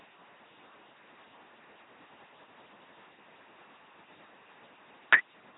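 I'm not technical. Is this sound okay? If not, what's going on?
No. Throughout, the speech sounds buzzy and robotic with occasional hiss, and nothing above about 3.9 kHz. This is an LPC-10 vocoder rebuilding the voice from buzz or noise.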